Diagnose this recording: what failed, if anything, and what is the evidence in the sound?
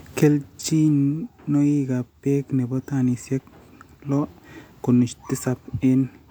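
Nothing in this recording failed. No stage of the chain, from wiring and conversion through to playback, leaves any audible evidence of a fault.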